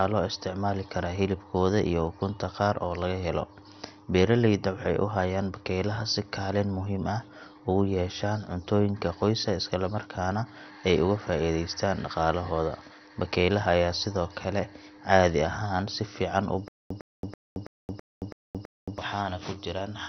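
Speech with what is likely heavy MP2 compression throughout: nothing above 6.2 kHz, a dull, gurgling, granular texture from flickering sub-bands that sets it apart from smoother low-pass muffling. Between 16.68 and 18.98 s comes a stutter with silent gaps: a 107 ms fragment repeats seven times, each followed by 222 ms of digital silence, likely a stalled stream retrying rather than a clean loop.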